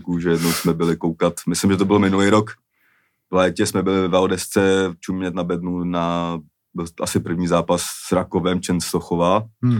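No technical faults can be heard anywhere in the speech recording. Nothing in the signal chain draws attention to itself at any point.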